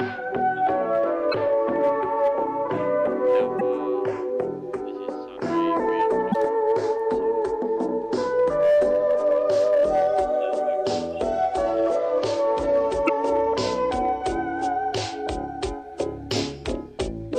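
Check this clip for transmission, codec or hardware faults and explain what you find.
The clip has one kind of fault: damaged data in a compressed stream. It occurs four times, at 1.30–1.34 s, 3.57–3.61 s, 6.31–6.35 s and 13.05–13.10 s. Each lasts about 40 ms. Corrupted bytes make the decoder misread frames and resync. Each event is a brief chirp or blip.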